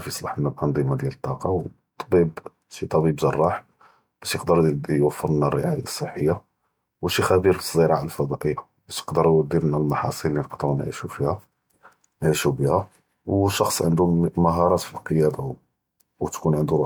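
No technical faults can be heard in this recording.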